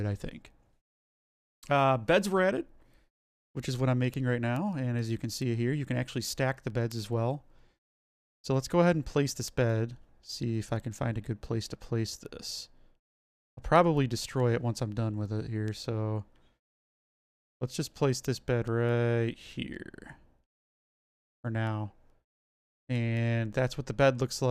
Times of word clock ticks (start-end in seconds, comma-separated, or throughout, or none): 0.29-24.45